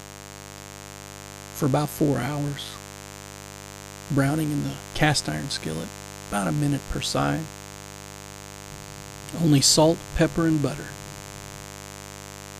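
A steady, raspy mains buzz runs through the whole clip, sitting only about 15 dB below the sound itself. Sharp switching spikes, most likely from a dimmer, rectifier or unshielded lead, leak in twice per 50 Hz cycle, spreading harmonics well up into the kilohertz range.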